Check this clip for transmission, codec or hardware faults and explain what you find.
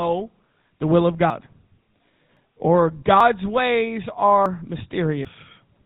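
The speech carries two faults: codec damage throughout and a series of skips.

Throughout, the sound has passed through a GSM full-rate codec, which rebuilds the voice from a vocal-tract model driven by a coarse pulse excitation. Nothing survives above 4 kHz, and the voice takes on a plainly audible buzzy, gravelly roughness, consistent with the 13 kbps GSM rate.

At 1.3 s (just after "the will of"), 2.37, 3.2, 4.46 and 5.25 s, the sound skips. This is likely a dropped buffer (overrun): samples were overwritten before being read, losing roughly 50 to 150 ms each time, and the audio jumps forward with no gap.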